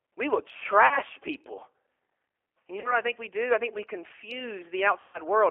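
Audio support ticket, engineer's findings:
G.729 codec in the call path, throughout: narrowband line, roughly 300 Hz to 3.4 kHz, nothing above. Sound consistent with an 8 kbit/s stream; pulse-coded excitation rebuilt through a vocal tract filter gives plainly audible roughness and a slightly synthetic speech texture.

VoIP packet loss concealed by the speech codec, at 0.87–1.00 s, 2.80–2.98 s and 5.02–5.19 s. Decoder fills the gaps by extrapolating the last pitch and filter at falling gain. About 40 ms lost in each of the first two and 120 ms in the third, which points to bursts of two, two and six packets. Speech smears into a fading buzzy tone or coloured noise, then sounds weak and distorted briefly after packets resume.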